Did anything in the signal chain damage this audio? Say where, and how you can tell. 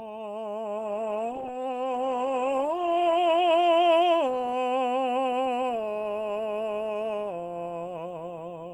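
Yes. A call bitrate drop at the codec stage affects the music from 0.78 to 4.73 s. Highs vanish and textures turn rough and watery, worst for 2.13 s. This fits a falling bandwidth estimate pushing the encoder from about 64 kbps to 16 kbps.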